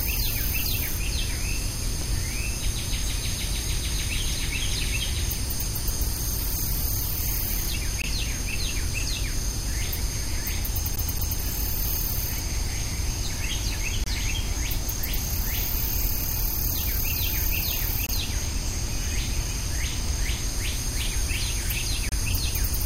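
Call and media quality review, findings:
Hard-edged silent dropouts of about 20 to 31 ms at 8.02, 14.04, 18.06 and 22.09 s. Gap between stream segments: timestamp misalignment at 2 s segment boundaries, padded with silence.

Quick repeated stutter, 10.96 to 11.41 s: a 227 ms slice replays twice with muted jumps. CD stuck on one turn: a scratch throws the laser back one track each revolution.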